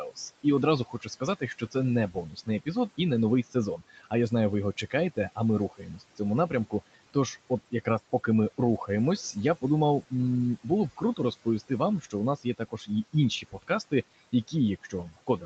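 Across the whole clip the room background sinks far down and breaks up, leaving scattered twinkling specks. This is overdone noise removal. The room noise sat about 19 dB below the speech, and the reduction was set far too hard. Narrow frequency bands that came close to its noise estimate were pulled right down or switched off, and the quieter parts of the speech went with them.

The same processing also produces noise suppressor artifacts. Between phrases the background drops by about 18 dB, then climbs back up beneath the speech whenever it resumes. This pumping comes from the suppressor re-judging every band frame by frame and lowering whatever it takes for steady noise. The top end stops at 8 kHz, consistent with a wideband call path, and this limit is separate from the fault.

From 0.11 s to the end, the speech is cut by the noise suppressor. Soft consonants and the tails of words come out swallowed or faint, and at the worst points they fall by about 17 dB. 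Those quiet speech sounds sat too close in level and spectrum to the estimated noise, so the suppressor classed them as background and turned them down along with it.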